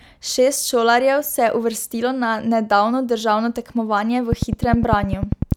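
From 4.33 s to 5.53 s a train of clicks runs over the speech: around fifteen near-identical pulses at a steady 10 per second, well above the speech level. The fixed rate and uniform shape set it apart from random crackle, and likely point to electrical interference.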